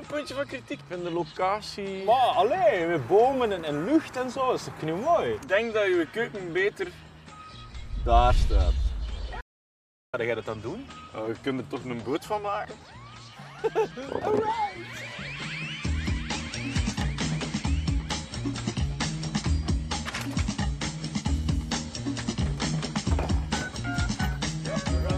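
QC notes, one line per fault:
9.41–10.13 s, audio dropout to silence: the sound cuts off abruptly and returns mid-flow after about 0.72 s of silence, with no room tone underneath. This is likely a momentary loss of the input signal while the recorder kept writing silence.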